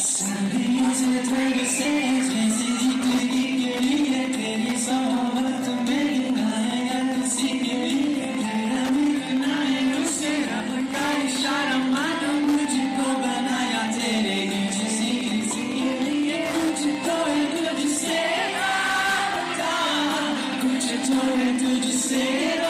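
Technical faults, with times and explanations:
Throughout: Wi-Fi interference. There's a steady ticking roughly ten times a second, sitting around 20 dB under the sound. That's a nearby Wi-Fi radio's beacon, every 102.4 ms, being picked up and rectified by the audio circuitry, so each transmission lands as a click.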